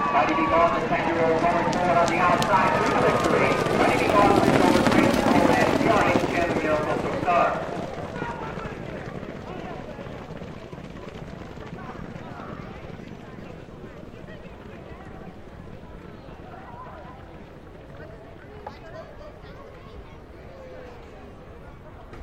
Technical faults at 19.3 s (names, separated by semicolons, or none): none